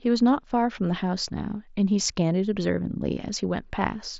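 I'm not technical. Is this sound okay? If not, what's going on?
Yes, the sound is okay; it's speech carried over a Bluetooth headset, and nothing in it has gone wrong.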